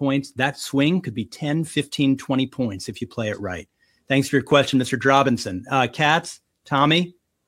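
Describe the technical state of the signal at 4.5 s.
A single sharp pop lands at 4.52 to 4.54 s, right after "for your", peaking a few decibels, around 5 dB, above the speech while the talking carries on beneath it. This is a loud pop, and it is likely caused by a brief voltage spike, from a plug, switch, static discharge or driver glitch, entering the signal path. The following circuitry shapes that pulse into the short burst heard here.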